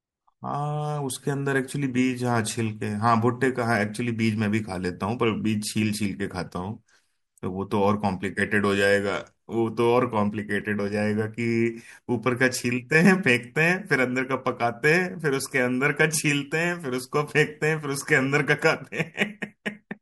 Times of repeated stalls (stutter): none

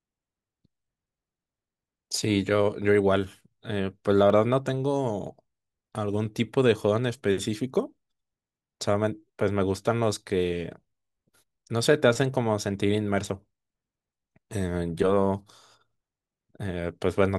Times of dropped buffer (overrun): 4.30

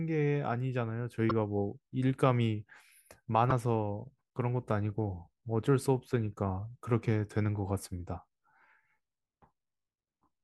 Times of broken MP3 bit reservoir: 1.28-1.31, 3.49-3.52

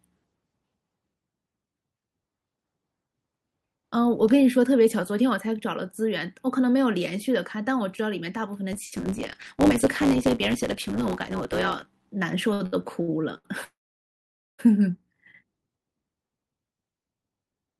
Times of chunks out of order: none

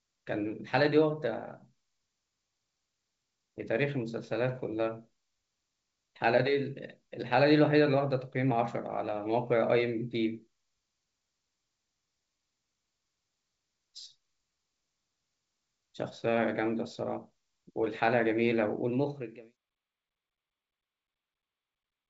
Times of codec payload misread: none

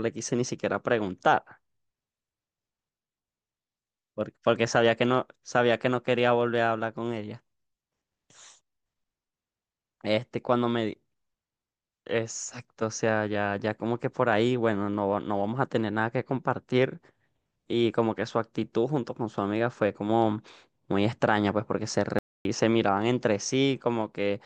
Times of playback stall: 22.19-22.45

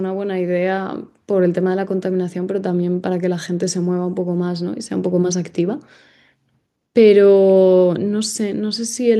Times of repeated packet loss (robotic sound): none

